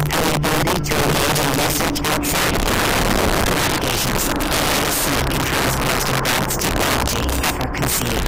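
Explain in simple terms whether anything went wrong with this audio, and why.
Integer overflow runs through the whole clip. The sound was pushed well past the loudest level the digital format can hold, and instead of being held at that ceiling, the peaks wrapped around to the opposite extreme. A small fraction of the audio, the loudest moments, flips this way, giving sharp, violent cracks on every loud part. Clipping, by contrast, flattens peaks into a fuzzy, buzzy distortion rather than these abrupt snaps.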